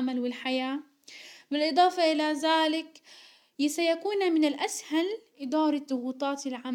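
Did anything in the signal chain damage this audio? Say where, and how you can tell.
No, nothing along the chain seems to have harmed this speech recording; I can't hear any point where a stage left its mark on the sound.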